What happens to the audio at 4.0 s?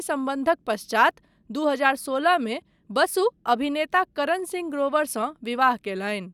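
Nothing goes wrong at 4.0 s; the speech there plays through intact, with no dropout, click or distortion.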